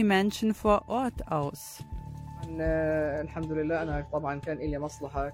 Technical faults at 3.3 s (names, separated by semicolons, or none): none